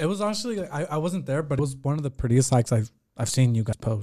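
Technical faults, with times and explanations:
1.59 s and 3.72 s, compressed frames skipped: the speech jumps forward, losing roughly 70 ms of audio between "I wasn't there but" and "was one of the", then about 100 ms near the end. Each loss fits a few whole 24 ms codec frames that were missing or rejected as damaged. Unlike a dropout, no silent gap is left.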